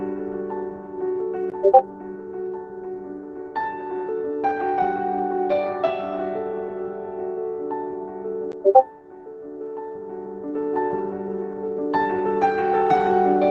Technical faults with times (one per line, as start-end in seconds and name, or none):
none